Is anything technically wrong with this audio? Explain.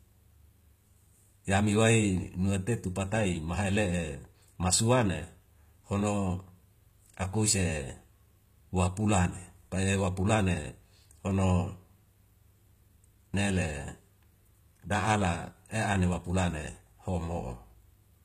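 Yes. Throughout the speech, the treble sounds gritty and metallic, with lispy s sounds, likely from HE-AAC compression at a bitrate around 20 kbps. Upper bands are copied up from lower ones rather than coded, so harmonics misalign. A spectrogram shows repeated, smeared texture above the crossover and nothing above 14.9 kHz.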